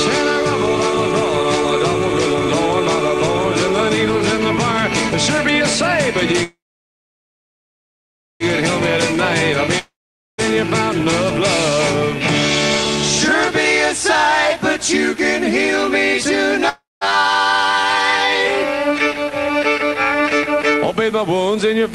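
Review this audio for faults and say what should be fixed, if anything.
Call audio freeze, 6.43 to 8.43 s: the sound stretches into a fading buzz and then about 1.8 s of silence, and it resumes where it left off, so roughly 2 s of delay is inserted and nothing is lost. Late packets likely emptied the jitter buffer. Prevent it by fixing the congestion or routing that holds packets up.

Long network dropout, 9.79 to 10.55 s and 16.69 to 17.04 s: each starts with a fading continuation of the last sound, then silence of about 0.48 s in the first and 0.2 s in the second. The sound returns further on, skipping about 0.6 s and 0.48 s of material. The likely cause is that no packets arrived for those stretches. Prevent it with a more stable link plus redundancy such as forward error correction.

Jitter buffer speed-up, 14.56 to 15.21 s: the sound runs at 108% speed with unchanged pitch and feels hurried. 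The receiver repeatedly cut short pitch-period slices, around 50 ms in total, to drain excess buffered delay after packets bunched up. Prevent it by smoothing packet delivery so the buffer doesn't overfill.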